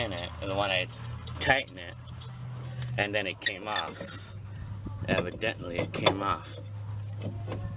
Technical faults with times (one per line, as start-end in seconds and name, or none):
none